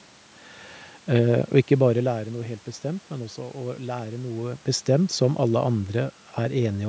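Nothing stood out on listening; the level changes around 1.5 s and again near 4 s sound like the talker shifting position relative to the microphone, and the room background belongs to the recording space.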